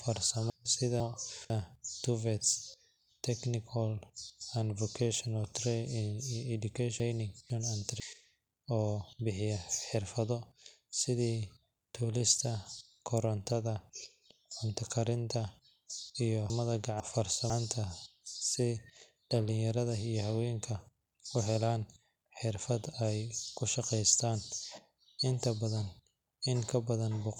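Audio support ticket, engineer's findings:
Chunks out of order at 0.5–1.5, 7.0–8.0 and 16.5–17.5 s: adjacent 500 ms chunks swapped, each with three hard joins. Probable buffer or write-queue reordering; one chunk delivered late.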